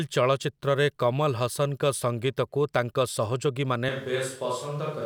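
Switch to a distant microphone at 3.89 s, lasting to the end: the speech abruptly turns roomy and hollow, loses bass, drops about 5 dB, and room noise rises to roughly 30 dB below it, likely because the close microphone dropped out and a farther one took over.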